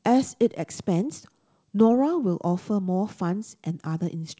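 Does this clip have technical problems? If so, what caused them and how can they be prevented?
No, this clip has no technical problems, so there is nothing to prevent.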